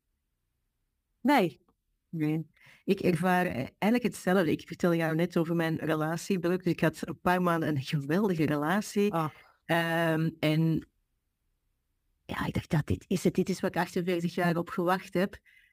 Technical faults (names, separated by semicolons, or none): crude rate conversion